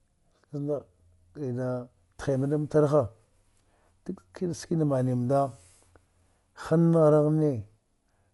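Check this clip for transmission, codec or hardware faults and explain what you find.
There's one fault, and it runs the whole clip: heavy lossy coding, likely Dolby Digital compression. The band stops dead at about 11.4 kHz, which fits a low rate around 64 kbps. Starved of bits, the encoder leaves many frequency lines to be filled with noise, so the speech sounds dull with a rough, fluttering grain.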